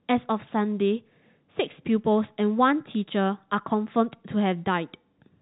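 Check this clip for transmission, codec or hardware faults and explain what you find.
No transmission, codec or hardware faults can be heard in this speech, which has the narrow band of G.711 telephone coding, with nothing above 4 kHz and at most a faint quantisation noise that follows the signal's level.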